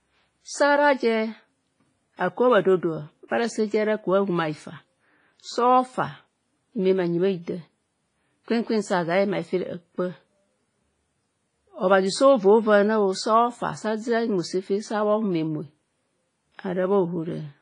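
A speech clip that sounds ringing and washy from start to finish, with a hiss that swells and fades along with the voice and no content at all above 10.5 kHz. Quantisation noise smeared over tens of milliseconds around each sound and weak spectral detail dropped out both point to heavy transform coding at a low bitrate, which fits something near 24 kbps. The likely cause is WMA compression.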